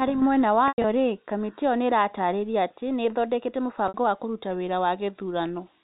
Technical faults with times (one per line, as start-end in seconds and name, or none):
0.68-0.84 packet loss with pitch repetition
3.88-3.94 packet loss with pitch repetition